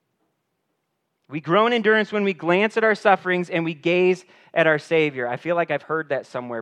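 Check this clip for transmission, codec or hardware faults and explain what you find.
Nothing found: the speech carries through with no audible fault to report.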